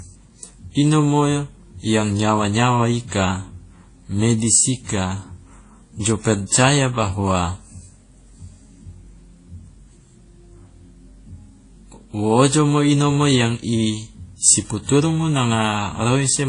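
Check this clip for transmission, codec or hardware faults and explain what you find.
One codec fault runs through the whole speech clip. Transcoding between lossy codecs: a Vorbis-like stage likely fed a WMA 1 encode, at about 34 and 32 kbit/s. The different codec artefacts sit together, with a spectrogram showing nothing above 10.1 kHz.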